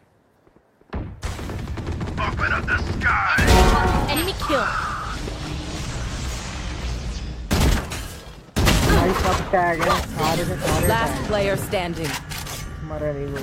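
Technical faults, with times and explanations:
No technical faults can be heard in this clip. There is nothing to list by time.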